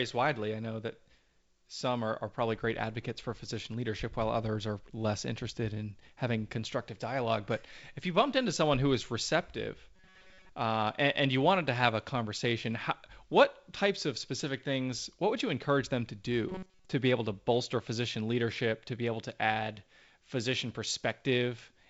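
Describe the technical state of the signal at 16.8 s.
A rigid, metallic buzz at about 188 Hz is imposed on the sound from 16.49 to 16.91 s: robotic sound from repeated short buffers. The likely cause is audio arriving too seldom, so a fragment of roughly 5 ms is looped through most of that stretch.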